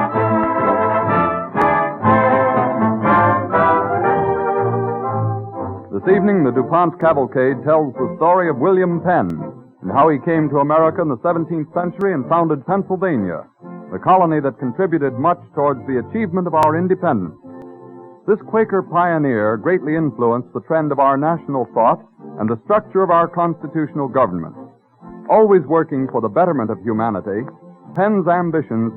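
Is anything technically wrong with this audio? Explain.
Yes. Seven sharp single clicks occur at 1.62, 7.01, 9.30, 12.01, 16.63, 17.62 and 27.96 s. Each is a brief vertical streak across the whole spectrum. They are likely dropped samples: well under a millisecond of the stream goes missing, so the waveform leaps straight to a later value and that discontinuity sounds as a tick. A dropout or buffer gap would leave an audible hole. These clicks are too short to remove any sound.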